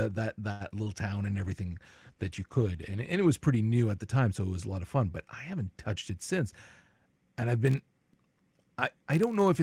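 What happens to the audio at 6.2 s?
Around 6.2 s the speech is passing through a jitter buffer speed-up, which runs from 5.95 to 7.22 s. The receiver's buffer had built up more audio than it wants, so it trimmed out many short pieces, each one or a few pitch periods long, to catch up. About a tenth of a second disappears, and the talk runs at roughly 107% and sounds hurried. Unlike a playback-rate error, the pitch stays exactly where it was.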